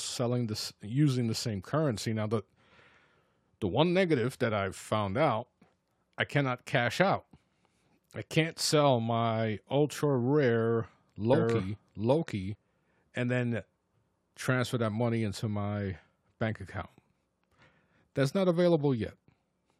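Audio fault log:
11.33–12.55 s, doubled audio track: after "sell my ultra rare", the speech plays over itself with a full-band copy trailing roughly 0.7 s behind at about the same level, with no decay or room colour, starting and stopping abruptly before "and then". The likely cause is a second, slower capture path mixing in.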